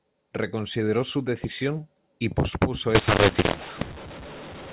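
Up to 2.95 s the speech has the usual narrow telephone sound, nothing above 4 kHz, which fits 8 kHz G.711 coding. Right after "su decisión y pospuso", from 2.95 s to the end at 4.72 s, you get mu-law and A-law mixed up: A-law-coded audio is being decoded as mu-law. That warps the level mapping, so some samples come out too loud and others too soft. The speech turns harsh and gritty, and the quiet gaps fill with hiss instead of staying near silence.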